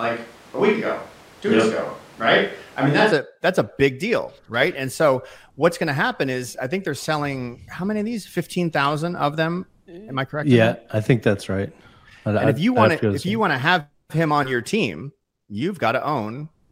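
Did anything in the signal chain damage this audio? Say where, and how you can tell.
Yes. From the very start of the clip to 3.10 s the speech sounds roomy and hollow, thin in the low end, with background noise sitting about 30 dB below the speech, and then it snaps abruptly to a close, full sound just before "a that's a big". The loudness hardly changes across the join. This is a switch to a distant microphone at the capture stage, most likely the close mic's feed dropping out so that a farther pickup carried the opening seconds.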